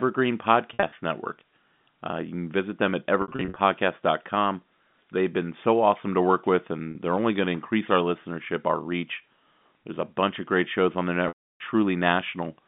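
Packet loss with pitch repetition hits at 0.74–0.92 s, 3.22–3.56 s, 6.91–6.95 s and 11.28–11.60 s. Lost packets are bridged by repeating the last pitch period. Short gaps sound held and buzzy. The 320 ms loss fades to silence, all over a narrow telephone band.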